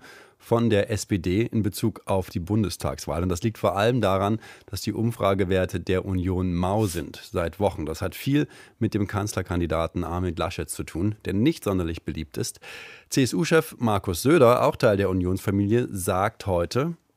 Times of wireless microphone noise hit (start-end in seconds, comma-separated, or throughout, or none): 6.77-7.03